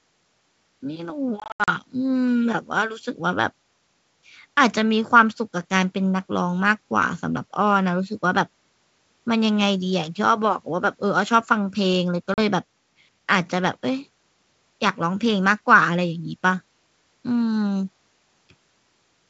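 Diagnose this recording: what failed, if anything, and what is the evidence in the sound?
Network stage: packet loss on an ADPCM call, carried over wideband G.722 that stays clear up to 7 kHz. From 1.40 to 1.69 s about 180 ms of sound drops out in hard-edged silent holes scattered over 280 ms, the longest 80 ms, which points to around ten lost packets. A 40 ms hole follows at 12.34 s. Unlike a buffer dropout, each gap is followed by slightly distorted speech, because the decoder's predictor and step size have drifted and take tens of milliseconds to resettle.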